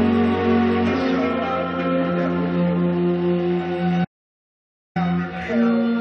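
The input feed was likely interrupted for just under a second, through a dropped device connection, a failed link or an accidental mute, while the recorder kept writing silence. The result is an audio dropout to silence from 4.05 s to 4.96 s: the sound stops abruptly mid-flow and resumes just as suddenly, with a gap of about 0.91 s of dead silence that has no room tone at all, and whatever occurred in that stretch is lost.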